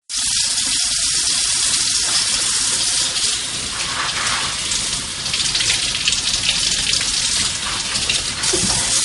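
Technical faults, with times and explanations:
Throughout, low-bitrate audio saved at a high bitrate: nothing is heard above 11.2 kHz, so the top end is dull and airless, and the smearing, swirling artefacts of heavy compression stay in the sound. This points to an MP3 that was likely first encoded at a low bitrate, around 48 kbit/s, and later re-saved at a high rate such as 320 kbit/s. The second pass cannot restore what the first discarded, so the cut-off and artefacts remain.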